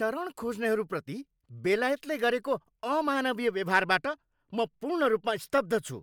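No technical faults can be heard anywhere in the recording.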